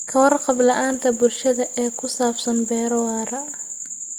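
Nothing is technically wrong with this speech clip.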